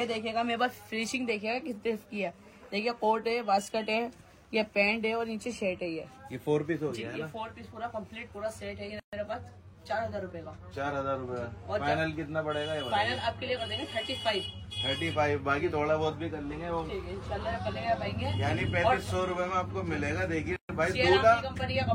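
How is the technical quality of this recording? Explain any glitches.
Two gaps at a join of encoded pieces break the recording, at 9.00 to 9.13 s (about 132 ms) and 20.56 to 20.69 s (about 129 ms). Separately encoded segments were spliced without trimming each run's start-up delay and final-frame padding, so silence sits between them. The sound drops out with smeared edges, then resumes exactly where it stopped.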